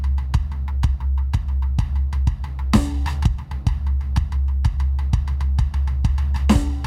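A short music clip with clock drift between sender and receiver running the whole way through. The sending clock is ahead by something like 5 percent, so the receiver's jitter buffer keeps overfilling and the playback side has to keep throwing small slices away to catch up. You hear that as repeated timing corrections from 0.26 s to 6.69 s, with playback running at about 104 percent speed. The cuts all go the same way but land at uneven spacing, so the groove gets little hiccups.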